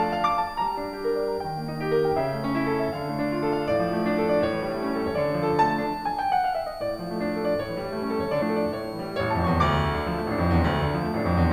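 A switching supply whistle runs under the music from start to finish. A switching power supply in the chain is running in an audible burst mode, or beating against a second supply. The result is a thin, high whistle. Its pitch wanders between about 4.2 kHz and 4.9 kHz rather than holding still. It sits roughly 25 dB below the music.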